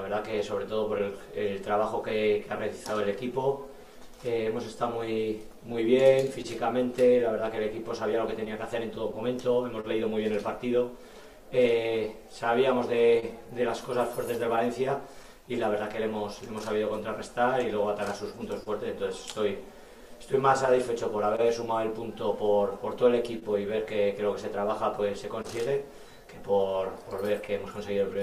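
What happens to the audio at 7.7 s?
The sender's clock runs about 1.5 percent slower than the receiver's, so the clock drift between sender and receiver leaves the jitter buffer slowly draining. The receiver has to stretch or repeat short pieces. Around 7.7 s, as elsewhere in the clip, this comes through as small timing hiccups that recur at uneven intervals, a stumble in the flow.

That moment also falls within a run of scattered short gaps from 0.31 s to 28.17 s, where roughly forty packets went missing or arrived late. Each small hole, none longer than about 30 ms, was covered by continuing the last sound, about 1 percent of the stretch in total. What reaches the ear is an occasional brief tick, smear or hiccup.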